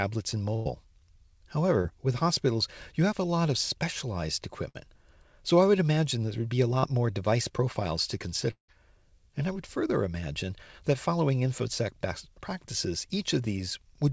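At 0.56 to 0.67 s a burst of packet loss cuts into the speech. About 100 ms never arrived, and the receiver stretched the last sound for roughly 95 ms, letting it fade before the speech resumes further on. Unlike the shorter glitches later, this gap is long enough to hear as a sustained, decaying fill rather than a quick blur.

At 1.81 to 1.91 s, just before "with hospitals you have", comes a short concealed packet loss. Only about 20 ms was missing. It was patched with about 30 ms of continued sound and then blended back into the real audio, with roughly 12 ms trimmed. The result is a brief smear, not an audible held tone.

A second burst of packet loss follows at 4.69 to 4.76 s, right after "lot of specialized". About 60 ms is gone, bridged by about 54 ms of fading continuation. It is briefer than the first burst but still has that held, decaying character.

At 6.78 to 6.85 s, between "there would be a" and "more device profiles to", another short concealed packet loss fills a 40 ms hole with about 41 ms of synthesized continuation. 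It sounds like a quick wobble across the join.

From 8.51 to 8.70 s the sound carries on as a decaying continuation for about 177 ms, about 110 ms of which has faded to silence, before the speech returns with roughly 180 ms missing. The likely cause is a long network dropout. What separates it from the bursts is the stretch of outright silence after the fill runs out.

Throughout, the G.722 call path limits the audio to nothing above 8 kHz.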